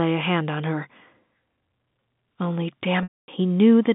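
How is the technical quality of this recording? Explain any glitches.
One clear glitch occurs near the end. From 3.03 to 3.28 s there is packet loss with pitch repetition: about 250 ms of the stream went missing, and the receiver filled the gap by repeating the last pitch period. With a gap this long, the repeated tone briefly holds, fades into silence, then the speech cross-fades back in. The G.711 telephone coding limits everything to roughly 150 Hz to 3.6 kHz.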